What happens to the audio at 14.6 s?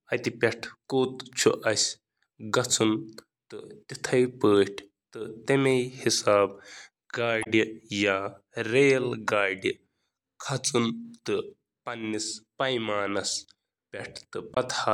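Damaged data in the compressed stream hits the speech from 14.54 to 14.57 s, a glitch of about 30 ms just before the clip ends. In that stretch the bytes reaching the decoder are wrong: lost, zeroed or overwritten. The decoder misreads the affected frames, loses its place and has to hunt for the next valid frame header before normal decoding resumes. The result is a short, harsh chirp or blip breaking into the speech.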